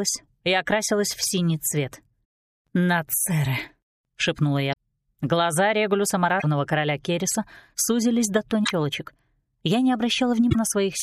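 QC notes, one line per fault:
4.69–4.74 s, 6.36–6.44 s, 8.61–8.71 s, 10.46–10.56 s: damaged data in a compressed stream. Four short glitches, 45 to 96 ms long, interrupt the sound. At each one, the decoder hits corrupted bytes, misreads or drops the affected frames, and loses sync until it locks onto the next valid frame header. On a spectrogram, each appears as a brief vertical disturbance unrelated to the surrounding content. On the waveform, each shows as an abrupt discontinuity at the edges of the damaged stretch.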